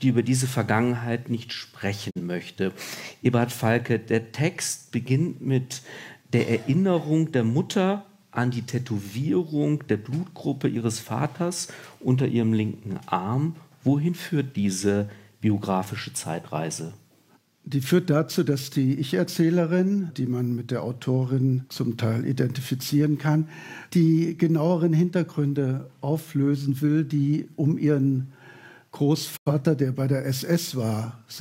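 Digital broadcast dropout twice: the receiver lost or rejected frames and muted until clean ones returned. At 2.09 s the audio fades out over 20 ms into a gap of about 43 ms, fitting one lost frame; at 29.36 s a longer hole of about 85 ms, fitting two.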